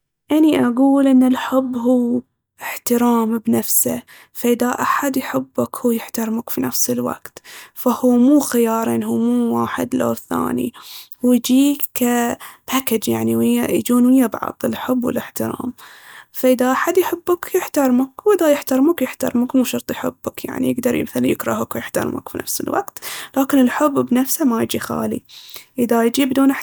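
Nothing here trips a technical fault at any point, so there's no glitch, dropout or distortion to flag anywhere in the recording.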